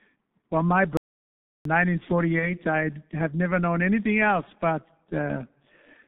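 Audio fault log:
throughout: G.723.1 codec. Speech is muffled and hoarse, confined to roughly 150 Hz to 3.6 kHz, with smeared consonants and a grainy, slow-moving voice model, which fits a heavy 6.3 kbit/s coder with 30 ms frames. This is a low-bitrate vocoder, not simple band-limiting, since the roughness goes beyond lost treble.
0.97–1.65 s: playback stall. The output drops to silence for 0.68 s, then resumes. The gap is empty, with no buzz or fading tone, which sets it apart from codec concealment. The likely cause is a player that ran short of data or was blocked.
2.39–2.53 s: VoIP packet loss concealed by the speech codec. A brief stretched fill replaces the missing sound and fades, which fits a single lost 30 ms frame. The weak, distorted voice lingers for tens of milliseconds after the lost frame before the decoder's state recovers. Unlike a stall, the gap is filled rather than silent.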